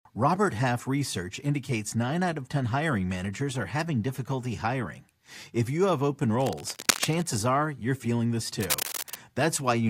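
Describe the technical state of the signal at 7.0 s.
At 7.0 s the speech sits under cable scratch noise, running from 6.33 to 7.25 s, after "you have open" and ending before "are you're feeling this". It is dense, uneven rustling only a little below the speech, unlike sparse separate clicks, likely from a worn connector's contact resistance shifting as it moved.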